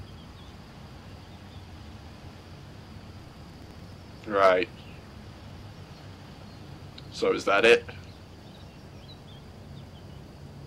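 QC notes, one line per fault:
3.16–3.96 s, buffer tearing. A robotic buzz at 23.4 Hz sits on the sound. The ring buffer's writer and reader have slipped. About a tenth of each buffer replays audio roughly 100 ms old, hard-joined on both sides. The rate fits a 2048-sample buffer.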